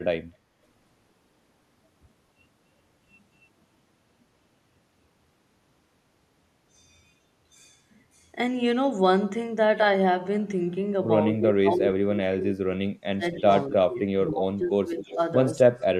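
From 11.33 to 13.24 s the echo canceller likely misread double talk as its own loudspeaker echo and turned the near talker down. This speech suppressed in double talk makes the speech sink in patches, by up to about 30 dB, over roughly a second and a half.

From 13.36 to 13.73 s an echo leak follows, likely because the far side's canceller let part of its microphone pickup through. A faint copy of the speech returns 262 ms late, about 25 dB below it.

Inside that leak, from 13.41 to 13.48 s, another brief double-talk suppression, likely from the same misjudgement, dips the speech by a few dB.

Suppression likely strikes again from 13.69 to 15.19 s, pulling the speech down by up to about 20 dB in pieces over roughly a second.

Near its end, from 15.07 to 15.17 s, a louder echo leak likely slips past the canceller. It is delayed 267 ms and sits about 15 dB under the speech.

A last scrap of leaked echo, likely from the same cause, comes from 15.79 to 15.85 s. 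It is delayed 269 ms and sits about 30 dB down.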